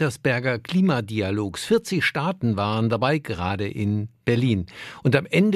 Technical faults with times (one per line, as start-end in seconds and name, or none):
none